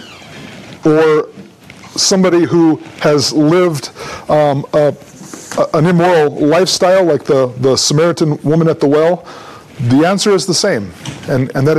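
No technical faults can be heard anywhere here.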